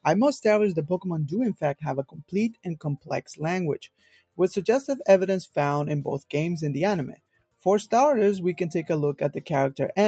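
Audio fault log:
Throughout: noise suppressor applied to music or sounds. A speech-tuned suppressor keeps mistaking sustained parts of the sound for noise and pulling them down. Level swings by around 10 dB. Onsets survive while held parts sink, so the audio pumps and thins.
1.54–1.83 s, 2.05–2.33 s, 3.84–4.39 s, 7.12–7.65 s: sound cut by the noise suppressor. Each time the suppressor clamps down hard, by about 20 dB at 1.54 s and about 21 dB in the others. Roughly 150 to 500 milliseconds of sound sink each time.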